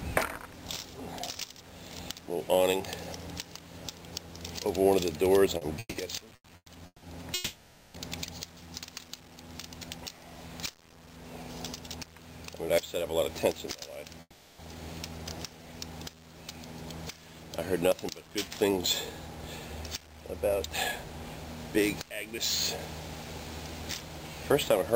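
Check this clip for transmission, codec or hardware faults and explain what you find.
The clip has network-delivery faults, not codec or hardware faults: a run of stutters, two freezes, two stretches of jitter buffer speed-up and one of slow-down.

From 5.57 to 7.04 s there are repeated stalls (stutter). Packets kept arriving behind the playback rate, so the jitter buffer ran dry five times. Each time the receiver extended the last sound, filling 550 ms in all, about 37% of that span, with the longest gap 160 ms. Nothing is lost, but the sound drags and hiccups. A spectrogram shows short bands of smeared, repeated harmonics where the fill sits. A waveform shows looping, slightly decaying stretches between normal segments.

Two call audio freezes follow, at 7.34 to 7.96 s and 14.21 to 14.61 s. In each, the sound halts and is replaced by a held buzz or hiss that fades. The first lasts 600 ms. 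The second lasts 380 ms and ends in about 30 ms of silence. The likely cause is packets delayed in transit emptying the jitter buffer, after which playback resumes where it stopped. On a spectrogram the harmonics freeze into flat horizontal streaks that fade out. The waveform shows a periodic, shrinking block.

Jitter buffer speed-up occurs at 13.03 to 14.14 s and again at 18.64 to 22.10 s. The buffer had built up more delay than its target, so the receiver trimmed one or a few pitch periods over and over. The first stretch runs at 107% speed and removes about a tenth of a second. The second runs at 103% and removes roughly 150 ms. Pitch stays the same, and the first stretch feels hurried. Spectrogram events look slightly compressed in time, and the waveform shows tiny splices at period boundaries.

From 15.57 to 16.21 s there is jitter buffer slow-down. With the buffer running low, the receiver repeated pitch periods to rebuild a reserve, adding 62 ms and playing at 92% speed. 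Sounds are drawn out at unchanged pitch. On a spectrogram, harmonic tracks are stretched horizontally. In the waveform, near-identical cycles repeat back to back.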